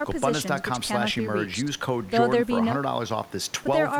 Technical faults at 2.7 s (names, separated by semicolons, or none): none